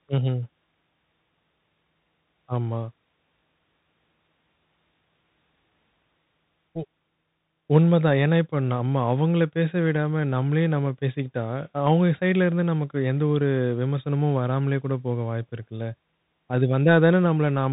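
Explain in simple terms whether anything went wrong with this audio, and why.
Bluetooth CVSD headset codec, throughout: the link cuts everything above 3.8 kHz and traces the sound in coarse up-down steps, leaving the speech muffled and plainly grainy.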